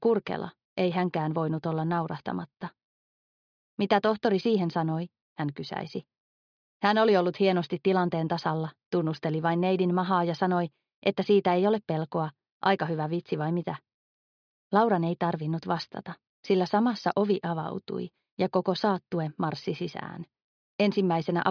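No technical faults can be heard anywhere in this audio. There are no events to place on the timeline.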